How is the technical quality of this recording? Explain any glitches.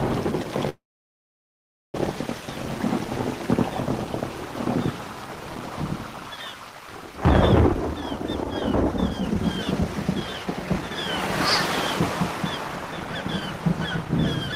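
The recording has two kinds of timing fault: a stall near the start and two later stretches where the audio is hurried.

From 0.69 to 1.96 s there is a call audio freeze, likely caused by packets delayed in transit until the jitter buffer ran dry. The receiver briefly extends the last sound as a fading buzz or hiss. It then falls silent for about 1.1 s. Once the packets arrive, the audio picks up where it stopped, so almost nothing is lost and everything after is 1.25 s later. On a waveform this looks like a short decaying tail followed by a flat line. A spectrogram shows a smeared band that fades into a blank gap.

From 7.67 to 10.91 s the jitter buffer speed-up plays the audio at about 132% speed. The buffer was holding more than its target, so the receiver repeatedly cut out pitch-period-sized slivers, removing roughly a second in total. Pitch stays the same, but the audio sounds rushed. 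A milder pass runs from 11.37 to 12.02 s at 109% and trims a few tens of milliseconds. On a spectrogram, events look compressed in time while harmonic spacing stays unchanged.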